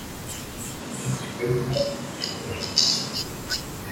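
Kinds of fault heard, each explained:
Switch to a distant microphone: from 0.82 to 3.14 s the speech abruptly turns roomy and hollow, with thinner bass, then snaps back, likely because a farther pickup replaced the close one. Loudness barely changes, and room noise stays faint, roughly 35 dB under the speech.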